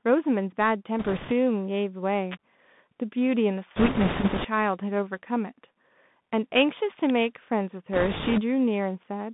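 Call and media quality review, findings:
Dull, boxed-in speech with scratchy s sounds and a fine granular hiss under everything, throughout. Bluetooth CVSD headset codec: band held to about 150 Hz to 3.6 kHz, fits a 64 kbps one-bit delta link whose adaptive step lags fast loud high content.

Rushing, crackly noise smeared over the speech at 0.99–1.33 s, 3.76–4.48 s and 7.93–8.42 s, heaviest in the middle burst. Bit errors on a Bluetooth voice link: equal-weight flipped bits decay quickly, so no hard clicks, just noise scaling with error rate, from a few percent to around ten.

Sharp snap at 2.32–2.35 s, short isolated click at 7.10 s, both sitting on top of the sound rather than replacing it. Electrical switching spike, likely a nearby switch, motor or static discharge arcing and coupling briefly into the audio line.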